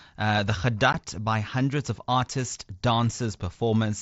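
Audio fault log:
0.93 s, unconcealed Bluetooth headset packet loss: a 15 ms hole in the speech with abrupt edges that can click, consistent with two lost mSBC packets replaced by silence. Concealed loss would smear or repeat sound across the gap instead.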